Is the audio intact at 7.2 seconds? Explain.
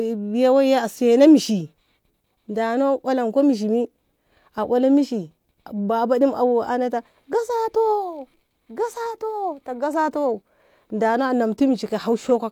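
Yes, at 7.2 seconds the speech plays through cleanly with no audible dropout, distortion or other technical fault.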